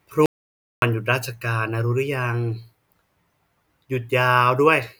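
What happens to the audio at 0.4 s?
An audio dropout to silence runs from 0.26 to 0.82 s. The speech cuts off abruptly and about 0.56 s of silence follows, with no room tone, before it resumes mid-flow. The input was likely lost while recording continued writing silence.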